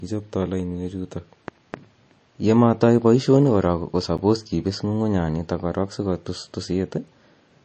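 Throughout the speech, the treble stops dead at about 8.3 kHz and the remaining band sounds watery and swirly, with metallic chirps on sibilants and smeared attacks. The likely cause is MP3 compression starved of bits, which fits a low bitrate around 32 kbps.

At 4.18 s a block of digital silence interrupts the audio: for 10 ms the output buffer was apparently not filled in time and carried zeros instead. The sound drops abruptly to nothing and returns with no fade, heard as a tick or dip.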